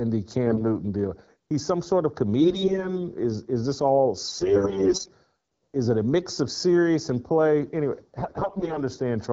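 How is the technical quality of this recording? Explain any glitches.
The recording has two problems: a steady hollow colouration throughout, and four short bursts where the speech turns rough and gargly. The underlying wideband phone coding, consistent with a mid-rate AMR-WB mode, adds only light smoothing.

Channel delay (comb filtering) runs through the whole clip. One channel trails the other by roughly 0.2 ms, and summing them to mono cancels shared content where the two arrive out of phase. The first notch falls near 3 kHz, right in the presence region, so the speech sounds slightly hollow and phasey. On a spectrogram this appears as a fixed dark band around 3 kHz across the entire clip, unaffected by what is being said.

AMR bit errors occur at 0.47–0.65 s, at 2.40–2.96 s just after "some sort of", at 4.27–5.10 s just after "is this all", and at 8.17–8.79 s. During these stretches a sizeable fraction of the less protected bits in each frame arrived flipped. 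The frames still passed the check on their critical bits and were decoded anyway, so the excitation pulses and fine spectral detail come out scrambled. Pitch and loudness hold roughly steady while the voice turns hoarse and scratchy. A spectrogram shows smeared, noisy harmonics, and the waveform looks jagged in these regions.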